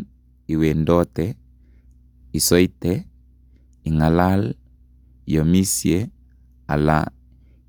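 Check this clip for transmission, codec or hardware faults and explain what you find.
No transmission, codec or hardware faults.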